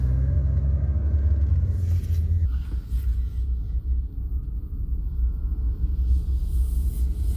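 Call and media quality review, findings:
Wrong sample rate, 2.45 s to end: playback clock mismatched with source, no resampling. Sound drops about 5.5 semitones and runs at 0.726x speed, slow and heavy. Ratio points to 44.1 kHz material played at 32 kHz; check output device rate negotiation.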